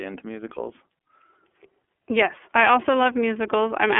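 iLBC codec, throughout: speech sounds rough and synthetic, coded frame by frame with nothing above 3.6 kHz, which fits iLBC's 13.33 kbps mode with 30 ms frames.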